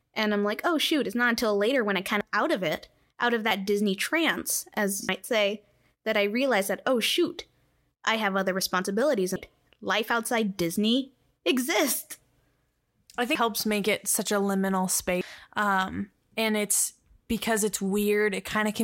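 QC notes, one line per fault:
2.21 s (after "later when I kind"), 5.09, 9.36, 13.35 (before "make it such a") and 15.21 s (after "it such a liminal"): damaged data in a compressed stream. Brief glitches as the decoder chokes on bad frames, loses sync and jumps ahead to the next header.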